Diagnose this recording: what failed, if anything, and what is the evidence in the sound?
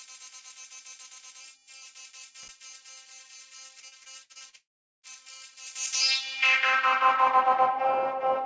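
Analogue wiring: a brief loose connector crackle at 2.43 to 2.49 s, an irregular scratchy burst lasting about 64 ms. A worn or dirty contact was making and breaking as it moved, chopping the signal and adding pops wherever DC sat on the line.

Network: repeated packet loss (robotic sound) from 3.80 to 4.56 s. Eight separate holes, the longest 58 ms, were each patched by extending the preceding sound, so nearly a third of that stretch is synthetic fill. The audio turns choppy, with fragments missing.

Network: a long network dropout is the likely cause of what follows at 4.56 to 5.06 s. The concealment first stretches the last sound into a fading buzz, then leaves about 0.39 s of silence before audio resumes, with roughly half a second of material gone. Throughout, the absence of content above 8 kHz fits the G.722 call codec.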